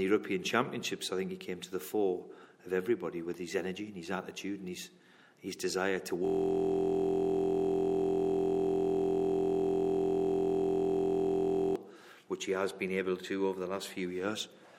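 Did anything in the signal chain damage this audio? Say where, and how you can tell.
Yes. The damage sits at the driver or buffer stage: a system hang loop from 6.25 s to 11.76 s. For about 5.5 seconds, one 23.22 ms slice of audio repeats exactly, over and over, so it comes out as a steady buzz at 43.1 Hz instead of moving sound. That loop length fits a 1024-sample ring buffer. The host or driver stalled and stopped refilling the buffer, while the audio hardware kept replaying the same block.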